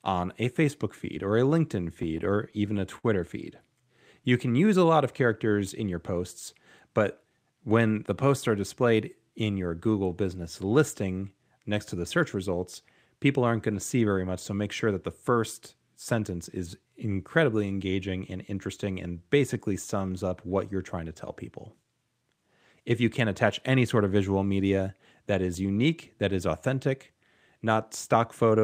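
A speech clip with repeated stalls (stutter) between 2.02 and 3.06 s: packets arrived late, the jitter buffer ran dry six times, and the receiver continued the last sound to fill 102 ms, the longest gap 53 ms. Nothing is lost, but about 10% of that span is concealment. The waveform shows short repeated stretches breaking the rhythm, and the spectrogram shows held frames. Jitter buffer slow-down appears at 3.78–4.87 s (92% speed, 91 ms added) and at 18.85–20.30 s, after "is incredibly engaging and" and before "what you're trying to" (94% speed, 103 ms added). The receiver repeated pitch periods to rebuild its reserve, so speech drags at unchanged pitch. Harmonic spacing stays constant on the spectrogram while syllables stretch. Jitter buffer speed-up runs at 6.88–7.68 s, between "characters in your posts" and "the posts are displayed" (109% speed, around 70 ms removed), and at 22.23–23.99 s, between "trying to tell people" and "of visual media that" (106% speed, around 100 ms removed). 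Excess buffered audio was trimmed by cutting pitch periods, so speech sounds hurried. Syllables appear compressed on the waveform, with pitch unchanged.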